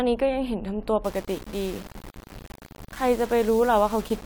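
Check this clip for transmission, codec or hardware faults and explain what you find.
One fault is present. From 1.04 s to the end, the speech turns grainy with distortion that tracks the signal, about 20 dB below it. This is likely low bit depth without dither, consistent with 5-bit rounding.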